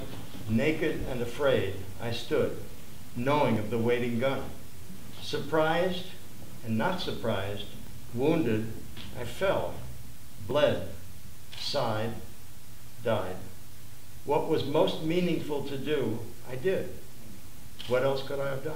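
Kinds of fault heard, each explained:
dropped buffer (overrun): Five brief skips at 3.56, 7.87, 10.51, 11.39 and 12.83 s, each with a small jump forward and no silence. The likely cause is input arriving faster than it was collected, so a few milliseconds were overwritten and the remaining edges were spliced together.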